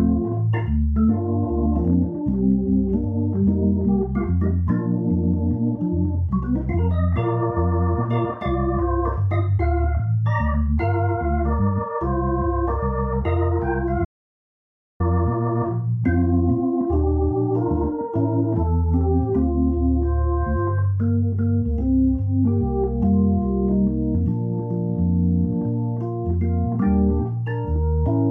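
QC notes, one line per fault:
14.05–15.0 s, audio dropout to silence: the input likely lost its signal for a moment, through a disconnected device, a broken link or an unintended mute, while the recorder kept writing silence. The sound stops abruptly mid-flow and resumes just as abruptly about 0.95 s later. The gap is dead silence with no room tone or noise floor underneath, and whatever occurred during that stretch is missing from the recording.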